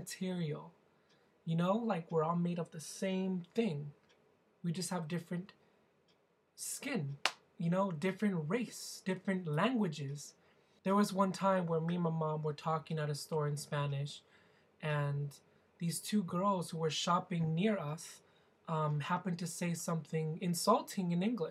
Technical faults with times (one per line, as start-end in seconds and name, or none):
none